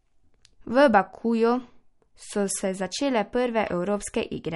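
All the way through, the speech has a watery, swirly edge and nothing above 11.2 kHz, likely MP3 compression starved of bits, which fits roughly 48 kbps.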